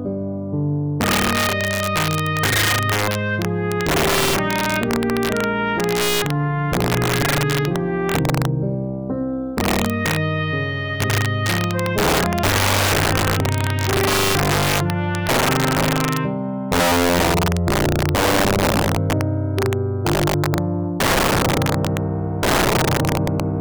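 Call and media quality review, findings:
Integer overflow throughout: gain stage driven about 9 dB past full scale wraps instead of saturating. About 4% of samples go over the limit and flip sign, giving violent cracks harsher than clipping.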